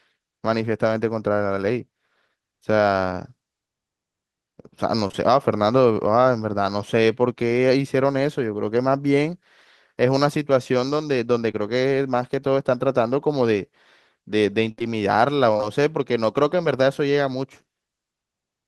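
Short concealed packet loss hits this speech recording at 5.07 to 5.15 s (two back-to-back 20 ms holes) and at 11.51 s, where the receiver extends the preceding sound to cover missing audio, leaving brief smears. Repeated packet loss (robotic sound) runs from 14.71 to 15.64 s: five gaps, the longest 55 ms, about 140 ms missing in total, each patched in turn, giving choppy speech with pieces missing.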